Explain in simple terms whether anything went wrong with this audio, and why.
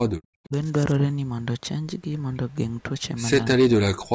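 Two dips in the speech stand out. There's a short one from 0.47 to 0.54 s, where the level drops noticeably, and a much deeper one from 3.56 s right to the end, where the speech nearly vanishes for about half a second. That pattern is most likely speech suppressed in double talk: both ends were talking at once, the echo canceller couldn't tell this talker apart from the echo, and it turned everything down.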